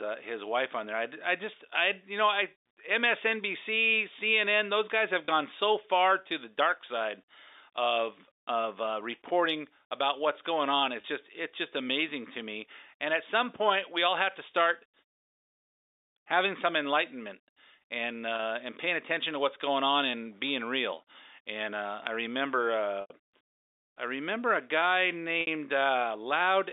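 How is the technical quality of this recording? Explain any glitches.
The recording has five short dropouts from packet loss with pitch repetition. It is a telephone-band call, with sound held to about 300 Hz to 3.7 kHz, which fits G.711 coding.

Packet loss with pitch repetition occurs at 5.25 s, between "those guys have" and "so far to the", and again at 11.01 s and 18.36 s. Each of these gaps lasts 30 ms. Longer gaps follow at 23.01 s, 90 ms after "uh I remember", and at 25.41 s, 60 ms after "I remember a guy". The receiver refills each missing stretch by repeating the last pitch cycle. The 30 ms gaps sound like a brief buzzy hold. The longer two fade toward silence before the speech cross-fades back.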